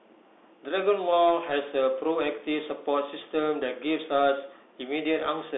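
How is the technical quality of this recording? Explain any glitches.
Quality is limited: the whole clip has gone through a Bluetooth CVSD headset codec, and it shows from start to finish. The speech sits in a narrow telephone band of roughly 300 Hz to 3.6 kHz, with nothing at all above 3.8 kHz. CVSD codes each sample as a single up-or-down bit with an adapting step size, which fits a 64 kbps link. The step can't keep up with loud, sharp sounds, so s sounds turn scratchy and a grainy hiss sits under the speech throughout.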